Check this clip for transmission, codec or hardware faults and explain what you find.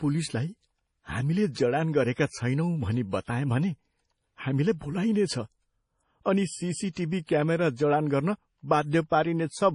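Two codec faults are audible in this speech clip: band-limiting and swirl typical of low-bitrate MP3 compression across the whole recording, and two pre-echo events.

MP3 compression: Throughout, the audio has nothing above 10.5 kHz and carries a heavy watery, swirling texture, with sibilants turning metallic and chirpy. The likely cause is an MP3 encoder starved of bits, consistent with about 32 kbps. To fit that budget it drops the treble at a fixed cutoff. It also discards weak spectral lines, which flicker in and out between frames and produce the unstable, gargled quality.

Pre-echo: At 1.53 to 1.56 s, just before "जडान गरेका", a hiss lasting about 33 ms leads into the onset. A second one, about 24 ms long, occurs at 7.26 to 7.29 s. In each case a sharp attack sits late in a transform block. The codec spreads that block's quantisation noise evenly in time, so the noise scaled for the loud attack also fills the quiet gap before it. 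The onsets therefore sound blurred and lose their crispness.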